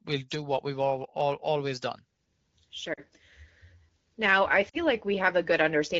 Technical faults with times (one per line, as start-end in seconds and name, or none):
2.93-3.00 lost AMR speech frames
4.69-4.77 lost AMR speech frames